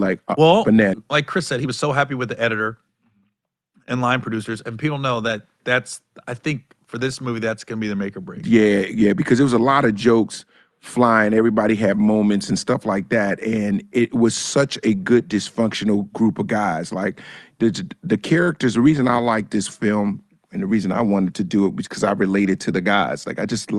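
From 1.03 to 3.18 s the receiver's jitter buffer, holding more audio than its target, performs a jitter buffer speed-up, repeatedly trimming out short pitch-period slices, about a fifth of a second in total. The speech runs about 9% fast at unchanged pitch and sounds hurried.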